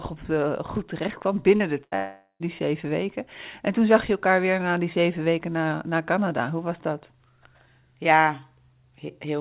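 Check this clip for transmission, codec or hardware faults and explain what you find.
Three transmission faults occur close together in this speech, all between 1.56 and 2.43 s. The G.711 mu-law call path itself passes nothing above 4 kHz.

From 1.56 to 1.63 s there is short concealed packet loss. About 40 ms never arrived, and the decoder extended the preceding sound to bridge it, leaving a brief smear.

From 1.84 to 1.95 s comes a burst of packet loss. Roughly 80 ms went missing in a row, filled by continued, decaying sound that comes across as a short held buzz or fading hiss before the audio jumps ahead.

From 1.96 to 2.43 s the sound is replaced for about 440 ms. First comes a carried-over buzz or hiss that fades, then about 100 ms of silence, and the speech resumes further on with content missing. This is likely a long network dropout.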